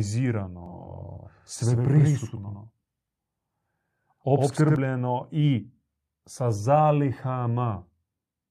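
The likely cause is a second capture path or an edit that mixed the same audio in twice, out of step by about a tenth of a second. From 0.66 s to 4.76 s this doubled audio track puts a second copy of the speech behind the first at roughly equal loudness. Each syllable arrives twice, clean and full-band with no room tail, giving a stuttering slapback effect that switches on and off abruptly at those two points.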